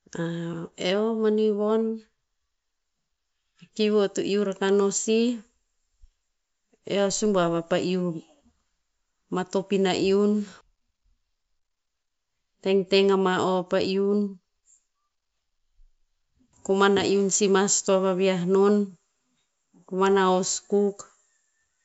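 No technical faults can be heard anywhere in the recording.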